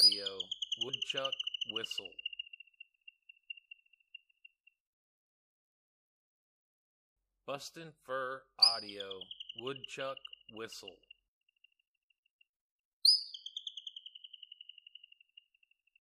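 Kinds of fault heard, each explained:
Compressed frames skipped: near 0.88 s roughly 50 ms of audio vanishes, consistent with two dropped 26.1 ms frames, leaving a smeared blip and a visible discontinuity in waveform and spectrogram.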